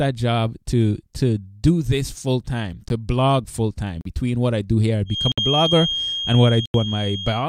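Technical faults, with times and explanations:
2.89 s, 4.01–4.05 s, 5.32–5.38 s, 6.66–6.74 s: block of digital silence. The audio cuts out with hard edges, first after "do this full time", then after "blog full time". Unfilled buffers, sized like 2048 or 4096 samples, leave ticks and short holes.
5.05–7.48 s: feedback whistle. A thin 3.2 kHz tone that slowly swells and fades sits a few dB under the speech from "I do here I" onward. A loudspeaker-to-microphone loop held just short of runaway is the likely cause.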